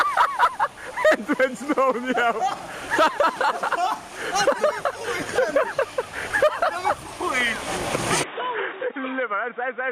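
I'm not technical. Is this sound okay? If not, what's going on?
No. At 8.24 s the sound abruptly turns duller and a little quieter, with a faint new background hiss, and stays that way to the end. Nothing above about 3.8 kHz gets through. This is likely an input switched to a poorer device, such as another microphone or headset, rather than a tone control: the hiss and volume change too.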